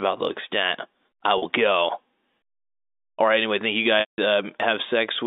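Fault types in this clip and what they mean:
Packet loss with pitch repetition, at 1.38 s and 4.00 to 4.18 s: audio packets went missing, and the receiver filled each gap by repeating the last pitch period and fading it out over about 50 ms. After "the extent I", the 40 ms gap comes out as a short, held, buzzy sound. After "right anyway thank you", the 180 ms gap outlasts the fade, drops to silence, and the audio returns through a brief cross-fade.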